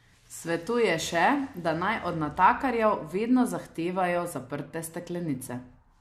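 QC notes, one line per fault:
No faults are heard anywhere in this clip. There is nothing to time-stamp or flag.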